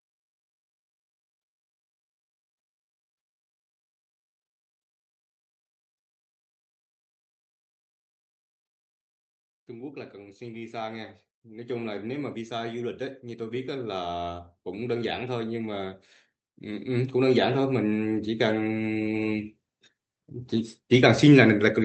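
From 9.7 to 16.03 s the automatic gain is rising: the AGC decided the input was too quiet and cranked up about 11 dB, so voice and room noise swell together. It happens again from 16.62 to 19.5 s, adding about 8 dB more.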